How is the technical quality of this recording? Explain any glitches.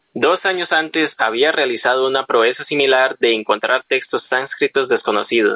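The speech pumps throughout, with the level lurching up and down.

Gain pumping runs through the whole clip, with the gain swinging by about 15 dB. Loud and quiet syllables sit unnaturally close in level, so the delivery sounds squashed and breathing. The likely cause is input gain set far too high for the microphone, so a fast limiter or compressor has to clamp down hard on each loud sound and release in the pauses.

The sound also stops sharply at 4 kHz, which fits a narrowband telephone codec on a call path rather than a glitch.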